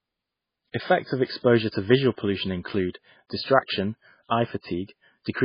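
Speech with heavy MP3 compression throughout, likely from a bitrate near 16 kbps: watery and swirly, with nothing above 5 kHz, which shows as a flat ceiling on a spectrogram.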